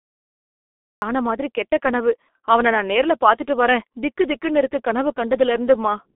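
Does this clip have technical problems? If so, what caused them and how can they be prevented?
Yes. The first second is digital silence, and at 1.02 s the sound begins abruptly, already mid-sound. This is a cut-off start. Recording or streaming began late, so the opening was never captured. There is no natural attack and no fade-in. The jump from silence straight into an ongoing sound gives a hard, unnatural onset. To prevent this, start capture before the speaker begins and keep a short lead-in buffer.

The whole clip carries heavy G.723.1 codec damage. The speech is muffled and hoarse, and consonants smear together. Nothing is heard above about 3.8 kHz, and the low end thins below about 250 Hz, which suggests a narrow telephone line band. The codec codes speech in 30 ms frames and updates its voice model slowly, so fast detail is lost. The heavy damage fits its 6.3 kbit/s mode. To prevent this, use a wideband codec such as Opus at a higher bitrate.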